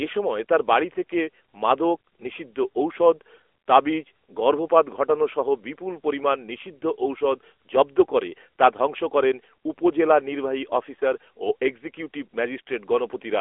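Speech runs through an AMR narrowband mobile codec for the whole clip. The band is cut to a telephone line, roughly 300 Hz to 3.4 kHz, and nothing above 3.8 kHz survives. So the sound is thin and muffled. The codec rebuilds speech from a vocal-tract model fed by sparse pulses, frame by frame. Its damage is plainly audible, a buzzy, synthetic edge. That level of artefact fits a mid-range rate near 10.2 kbps.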